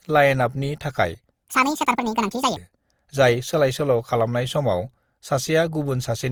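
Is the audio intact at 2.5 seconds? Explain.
No. A section at the wrong speed runs from 1.44 to 2.56 s, likely from audio played against the wrong clock at 1.77 times its recorded rate. Speed and pitch rise together, so the speech sounds hurried and raised by about ten semitones.

Generation loss is also present at 2.5 s and throughout. The audio sounds swirly, smeared and hollow, with blurred attacks. That points to likely repeated Opus re-encoding, around 48 kbit/s and a few passes, each requantising on a shifted frame grid so noise and spectral holes pile up.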